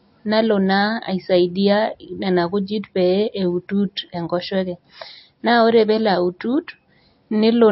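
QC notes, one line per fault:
throughout, MP3 compression: the speech sounds plainly watery and swirly, with nothing above 5.6 kHz. The likely cause is a low-bitrate MP3 encode, fitting roughly 32 kbps, that cuts the treble and lets weak frequency lines flicker between frames.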